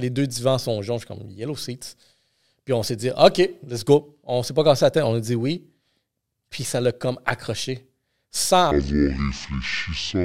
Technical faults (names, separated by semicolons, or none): section at the wrong speed